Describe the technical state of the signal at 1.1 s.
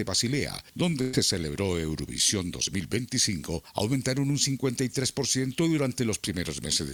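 At 1.1 s the sound stalls: from 1.01 to 1.15 s the last moment before the break is stretched out and gradually turned down, with no true silence, and then the audio jumps ahead. This is a burst of packet loss. About 120 ms of audio never arrived in time, so the receiver filled roughly 116 ms by extending and fading what it last had, and the missing stretch is simply skipped when playback resumes.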